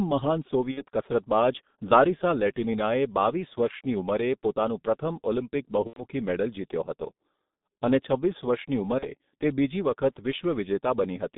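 Throughout, the speech is muffled and hoarse, with smeared consonants and nothing above about 3.7 kHz or below 150 Hz. This is heavy G.723.1 codec damage: its slow-updating 30 ms voice model fits a bitrate near 6.3 kbit/s over a narrow telephone line band.

At 0.71 to 0.85 s, 5.87 to 6.05 s (between "ઉંમરે પોતાનું પ્રથમ ઓલિમ્પિક" and "મેડલ જીત્યો હતો") and 8.99 to 9.05 s, the sound stretches into a fading buzzy tone or coloured noise and stays weak briefly afterwards. This is VoIP packet loss concealed by the speech codec, which fits gaps of about 60, 90 and 30 ms.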